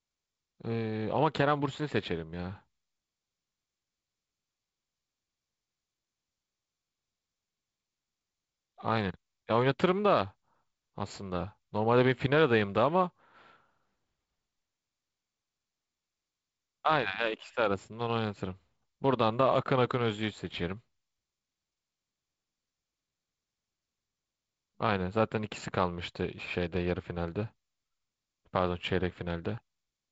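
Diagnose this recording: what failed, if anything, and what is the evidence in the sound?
Throughout, the speech sounds thin and phasey at the top, with a fixed dip near 7 kHz, just under the 7.7 kHz ceiling. That is channel delay (comb filtering) at the buffer stage. One channel lags by a fraction of a millisecond, fitting about four samples, and the mono sum cancels there.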